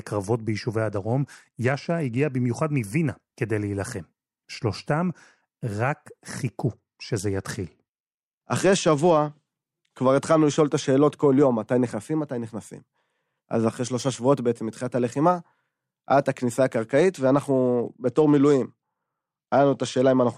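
A Bluetooth SBC bit pool drop occurs at 0.89–2.32 s, 6.67–9.46 s and 17.12 s to the end. The treble dulls and gritty noise appears, consistent with a bit pool cut from 28 to 11, near 90 kbps. On a spectrogram the upper bands empty out.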